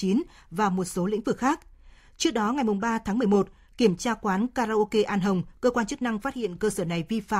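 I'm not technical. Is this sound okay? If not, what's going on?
No. At about 6.35 s, right after "quan chức năng phát", the speech suddenly gets quieter for about a fifth of a second, then jumps back at 6.55 s. It's likely one channel drops out: one of the two stereo sides briefly goes silent, so only half the sound reaches you.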